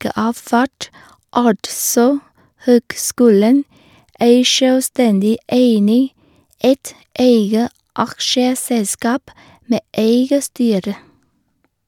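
No technical faults can be heard anywhere in the speech. There is nothing in the audio that needs a timestamp or an explanation.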